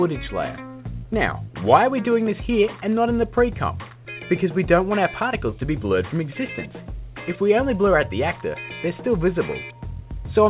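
No faults to report; the audio has gone through a telephone-grade call path, with nothing above 4 kHz, consistent with G.711 mu-law at 64 kbps, and shows nothing beyond what that path normally does to sound.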